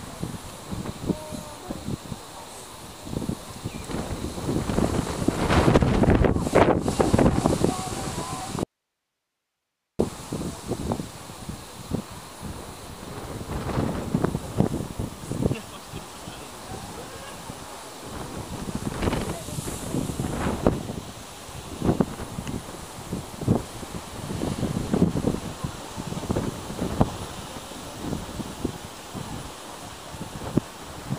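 At 8.63–9.99 s, audio dropout to a faint residue: abrupt cut to hiss, likely lost input on a live path; waveform shrinks to thin noise.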